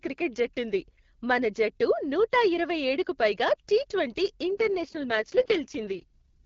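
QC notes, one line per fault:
4.51–6.45 s, AMR rate drop: the speech turns raspy and synthetic with no gap or narrowing of the band, as the wideband codec switches to a leaner mode, which fits a step from 12.65 kbit/s down to 6.6 kbit/s, with fewer bits describing the voice.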